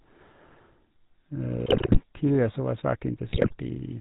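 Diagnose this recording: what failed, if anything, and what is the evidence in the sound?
The speech has a buzzy, gravelly roughness throughout, with nothing above 4 kHz. That is the GSM full-rate codec at the codec stage, which fits 13 kbps GSM. It models the vocal tract, drives it with regularly spaced pulses, and keeps only every third excitation sample.

From 1.66 to 2.00 s and again from 3.28 to 3.55 s, the sound breaks into squawks, pops and gargling. These are GSM bit errors arising in the network stage. Corrupted filter, pitch and gain parameters reach the decoder, warping the spectrum and spiking the level frame by frame.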